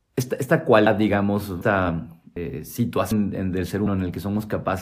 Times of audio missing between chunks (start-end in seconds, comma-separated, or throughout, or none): 0.86, 1.61, 2.36, 3.11, 3.86